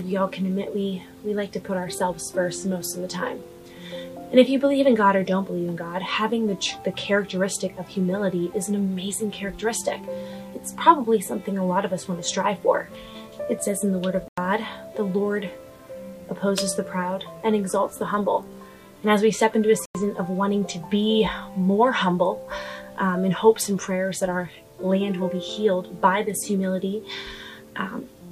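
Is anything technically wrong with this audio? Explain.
Yes, there are two corrupt frame muted dropouts: 14.28 to 14.46 s, a gap that fits two lost frames, and 19.86 to 19.95 s, about one frame. Damaged compressed frames got rejected by the decoder and replaced with silence, so the sound cuts out abruptly while timing holds.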